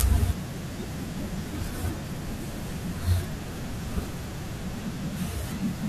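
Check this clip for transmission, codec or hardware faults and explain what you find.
Nothing faulty can be heard anywhere in this speech.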